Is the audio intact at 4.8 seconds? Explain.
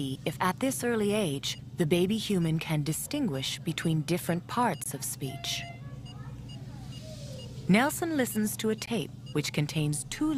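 No. From 4.84 to 4.86 s the sound drops into a hard-edged hole of silence about 20 ms long. This is a gap between stream segments: the time stamps of two adjoining segments leave a short space, which the player fills with silence. Nothing is lost.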